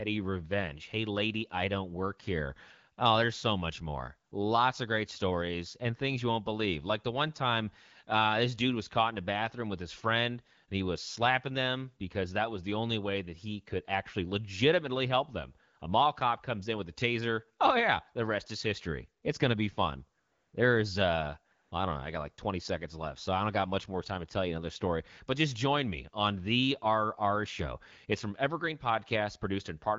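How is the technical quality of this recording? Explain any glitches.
The recording is speech carried over the AMR wideband (HD Voice) codec, with light coding damage, which fits the 12.65 kbit/s mode, plus four brief comfort-noise dropouts.

AMR comfort noise: at 4.29 s after "there's so much more", at 15.79 s, from 20.19 to 20.53 s after "going to be fun", and from 21.53 to 21.71 s before "I don't know I", the real background gives way to a steady, smooth hiss. The phone judged these moments silent and stopped sending speech frames, so the receiver filled the gaps with synthetic noise.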